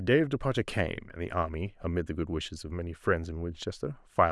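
No technical faults are audible.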